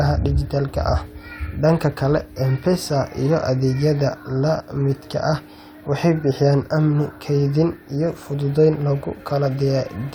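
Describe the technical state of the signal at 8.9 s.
At 8.9 s the speech signal is intact, with no audible fault at that moment.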